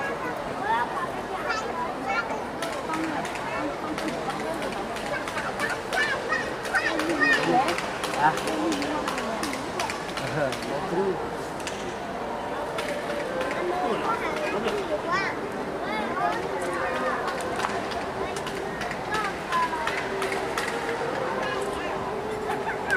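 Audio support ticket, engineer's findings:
Engineer's findings: no audio fault found on review of the ticket audio.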